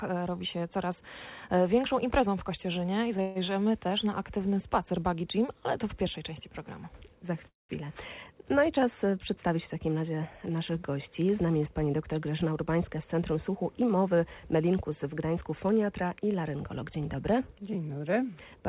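Call audio freeze at 3.21 to 3.38 s and again at 7.48 to 7.72 s. Each time the sound stops moving and the last instant is stretched into a decaying buzz. The first lasts about 0.14 s, while the second fades after its first few tens of milliseconds into about 0.17 s of silence. The likely cause is late packets draining the jitter buffer. The audio then resumes where it paused, so nothing is lost, but it now runs 0.14 s and then 0.36 s later.

Jitter buffer speed-up from 12.44 to 14.85 s. Here the receiver had built up more delay than it wanted and trimmed it by repeatedly cutting out tiny pitch-period-length slices. About a fifth of a second disappears over that stretch, so the sound plays at roughly 107% speed with its pitch unchanged and comes across as rushed. Throughout, nothing above 4 kHz survives, consistent with a narrowband G.711 mu-law call path.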